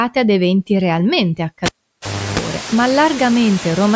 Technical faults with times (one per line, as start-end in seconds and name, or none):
0.00-3.95 noise suppressor artifacts
1.66-2.39 cable pulled and plugged in